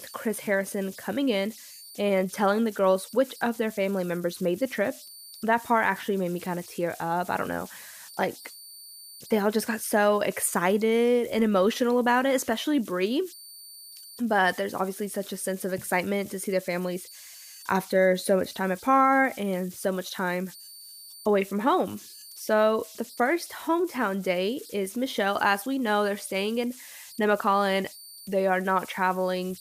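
Throughout the recording, the delta-sigma converter runs without dither. Whenever the speech level drops low, its modulator settles into repeating bit patterns, and these converter idle tones ride on the signal for the whole clip. The result is a thin whistle around 5 kHz, sitting only about 22 dB below the speech. It is most exposed in the pauses, and under quieter syllables it turns into a grainy, chirping texture.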